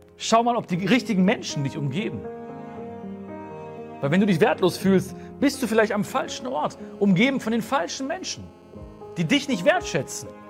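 From 6.3 s to 9.51 s a hard, raspy buzz sits about 30 dB below the sound, steady and full of harmonics over a 217 Hz fundamental. This is GSM phone buzz: a nearby 2G phone on a call transmits bursts at 217 per second, which the audio circuitry rectifies into the audible signal.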